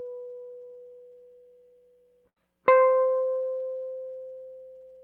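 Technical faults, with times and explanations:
2.29 to 2.43 s: burst of packet loss. Lost packets make the receiver stretch the last music fragment, fading it for 65 ms. The 60 ms of music in between is lost, and playback resumes slightly further on.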